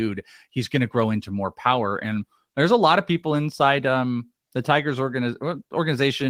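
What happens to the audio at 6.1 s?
At 6.1 s the speech carries on intact, with only the light softening of Opus voice compression running in its hybrid mode at about 20 kbps.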